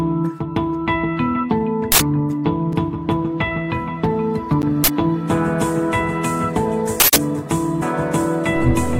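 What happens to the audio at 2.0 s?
The 2.0 s mark is the end of an uninitialised buffer fault running from 1.92 s to 2.00 s, an 80 ms block. The playback chain sent that block out before any audio had been written into it, so whatever stale values sat in memory were read as sample data. The result is a short, loud burst of harsh digital noise that abruptly replaces the program material for those 80 ms, then cuts back out just as suddenly.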